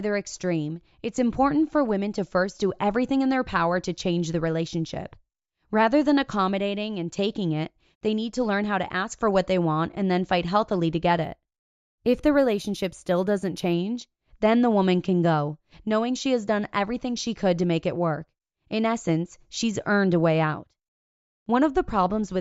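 From 11.24 to 13.73 s, right after "fight healthily to get", the speech shows imaging from linear upsampling. The audio appears to have been raised to a higher rate by joining samples with straight lines, which fits a 16 kHz source brought up to 48 kHz. The top of the original band dulls, and a faint mirror image folds into 8 kHz to 16 kHz, roughly 35 dB below the signal, giving sibilants a thin metallic shimmer. On a spectrogram, a pale reflected copy of the upper band appears above 8 kHz.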